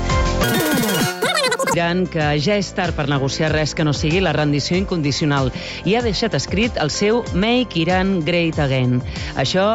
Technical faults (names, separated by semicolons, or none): wrong sample rate